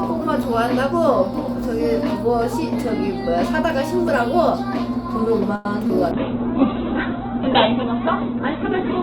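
A recording of everyday sounds with three faults in the call path. At 5.55 s a late packet left the jitter buffer empty, causing a short stall: the receiver stretched the last sound for about 97 ms until the packet arrived and then continued from the same point. Nothing is lost, but a sound is held too long with a faint buzz or dip, and everything after it runs about 97 ms later. Shortly after, at 5.87 to 5.91 s, a short concealed packet loss means about 20 ms of audio never reached the decoder, and the receiver filled the gap by extending the preceding sound before blending back. It is heard as a brief smear or wobble, and a short transient there may be gone. From 6.13 s to the end a call bitrate drop cut the encoder from 64 kbps to 7 kbps, and the audio bandwidth fell from 20 kHz to 4 kHz. The sound turns muffled and rough, with the upper frequencies missing and a watery, coarse texture.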